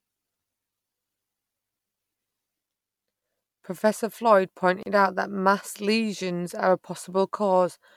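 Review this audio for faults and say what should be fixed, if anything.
A gap at a join of encoded pieces leaves 33 ms of silence at 4.83 s, before "out that mass lesions". Untrimmed encoder delay and padding remained at the join. Trim both before joining segments.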